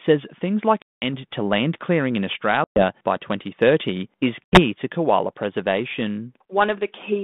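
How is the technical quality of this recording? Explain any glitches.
The recording is a telephone-band call with three dropouts, each caused by packet loss on an ADPCM call. The G.726 coding at 32 kbit/s sounds band-limited to about 150 Hz to 3.6 kHz.

The gaps are at 0.82–1.14 s (between "things like" and "to land clearing in", about 200 ms lost), 2.64–2.84 s (after "to land clearing in", about 120 ms), and 4.45–4.60 s (just before "to koala", about 80 ms). Each is a hard-edged silence where packets went missing. The receiver's adaptive predictor and step size then no longer match the sender's, so speech resumes slightly distorted before settling within tens of milliseconds.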